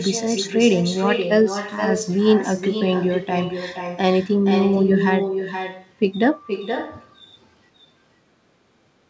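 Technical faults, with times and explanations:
Throughout, echo with no canceller: each phrase returns as a distinct, thinner copy roughly half a second later, about 6 dB down, unlike reverb's smooth decaying tail.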